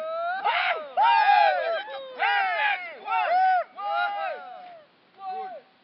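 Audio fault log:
Nothing to log here; this little recording of sounds comes across without any technical trouble worth noting.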